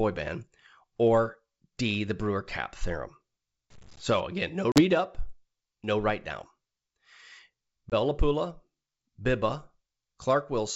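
From 3.70 to 4.20 s the speech turns grainy or harsh, a gritty distortion riding on the waveform for half a second. The likely cause is a stuck bit: one data bit held at 0 or 1 by a faulty line or converter, so about half the samples are pushed off by that bit's weight in a pattern that follows the signal itself.

At 4.72 s a hard-edged gap of about 40 ms opens, ending by 4.80 s, roughly two packets' worth. When the speech resumes it comes back with a brief roughness before settling within some tens of milliseconds. This is packet loss on an ADPCM call. The missing audio was filled with silence, and the decoder's adaptive predictor and step size drifted out of step with the sender's until they realigned. A second, shorter dropout of about 20 ms, around one packet, occurs between 7.90 and 7.94 s and behaves the same way. The G.722 wideband coding at 64 kbit/s keeps the band up to 7 kHz, with at most a faint hiss above 4 kHz.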